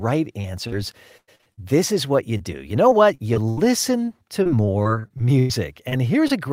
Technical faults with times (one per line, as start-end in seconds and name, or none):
0.41-0.73 short concealed packet loss
1.17-1.59 repeated packet loss (robotic sound)
2.37-2.41 short concealed packet loss
2.89-3.67 repeated packet loss (robotic sound)
4.05-5.51 repeated packet loss (robotic sound)
5.89-5.94 short concealed packet loss
6.28-6.31 short concealed packet loss